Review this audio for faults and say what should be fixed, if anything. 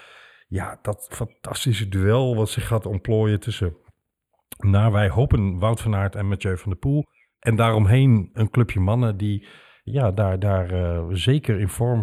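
The speech has channel delay (comb filtering) all the way through. One channel sits a hair behind the other, roughly a tenth of a millisecond, which fits a lag of just a few samples. When the two get folded to mono, the shared content cancels at evenly spaced points, the first landing somewhere around 5 kHz. That notch takes the bite out of the upper presence range, so everything comes across a bit hollow and dulled at the top. To prevent it, keep both channels sample-aligned before any mono fold-down, and check the mono sum against the stereo source while you're at it.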